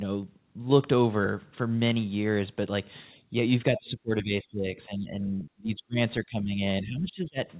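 From 3.7 to 5.27 s the speech sinks by up to about 20 dB. This is speech suppressed in double talk. Both ends were likely talking at once, and the echo canceller, unable to separate the local talker from the loudspeaker echo, attenuated everything. At 5.40 to 5.44 s a faint scrap of the other side's voice leaks through, about 35 dB below the speech. The echo canceller likely left a residue of the far-end signal in the microphone path. The suppression returns at 5.46 to 5.97 s, now deeper at about 35 dB, so the speech nearly vanishes. It recurs at 6.24 to 6.62 s and 6.82 to 7.37 s at about 20 dB, again likely from overlapping talk. Throughout, the narrowband sound with nothing above 4 kHz fits the G.711 A-law call path.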